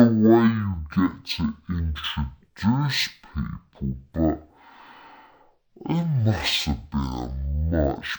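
From start to finish the speech runs at half speed and a full octave low: stereo read as mono, with interleaved left and right samples played as consecutive frames of one channel. Unlike a plain sample-rate mismatch, it adds a faint mirrored copy in the upper spectrum.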